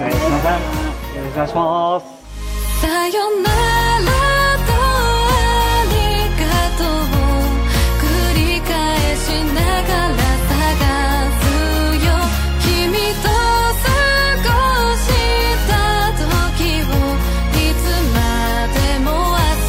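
No technical faults can be heard anywhere in the clip. There is no moment in it that calls for a timestamp or a closer listen.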